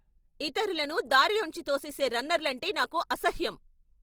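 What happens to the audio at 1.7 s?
At 1.7 s the speech carries plainly audible Opus compression damage, present across the whole clip rather than at that moment alone. It sounds grainy and rough, with a noisy texture on voiced sounds instead of swirling. The likely cause is the music-oriented CELT mode at a rate that fits about 24 kbps. With too few bits, band energies survive but their detail is filled by folding or noise. Bandwidth stays full, reaching about 20.2 kHz.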